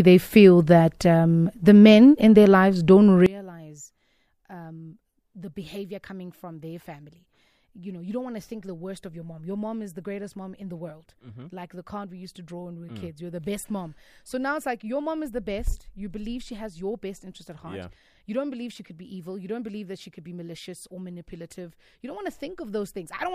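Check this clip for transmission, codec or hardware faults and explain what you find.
One fault is present. From 3.26 s to the end, after "in their lives don't", one channel is likely inverted. Summed to mono, the shared speech cancels, dropping about 22 dB to a faint trace.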